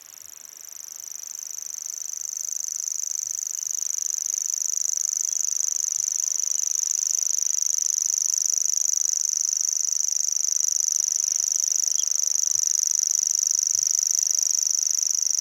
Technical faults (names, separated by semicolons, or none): none